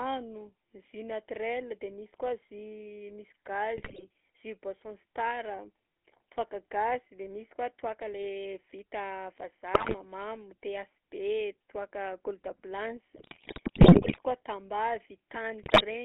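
Throughout, the speech carries a buzzy, gravelly roughness inside a narrow telephone band of 250 Hz to 3.4 kHz. That is the GSM full-rate codec, which rebuilds the voice from a vocal-tract model driven by sparse, regular pulses, consistent with the 13 kbps full-rate coder.

From 3.76 to 4.03 s, 9.74 to 9.95 s, 13.16 to 14.18 s and 15.62 to 15.84 s, the sound breaks into squawks, pops and gargling, longest in the third burst. These are GSM bit errors. Corrupted filter, pitch and gain values reach the decoder, warping the spectrum and level frame by frame.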